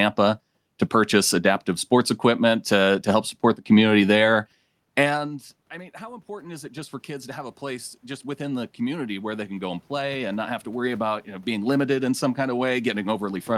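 Automatic gain rising runs from 5.08 s to 13.51 s. Once the talker moves away around 5 s and the input drops by about 21 dB, the gain control slowly adds about 17 dB, so the speech and the room noise swell up together.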